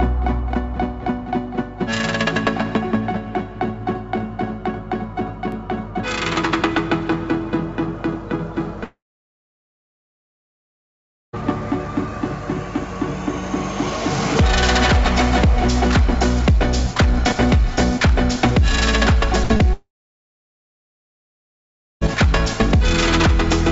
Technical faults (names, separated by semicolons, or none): repeated buffer; long network dropout; burst of packet loss; short concealed packet loss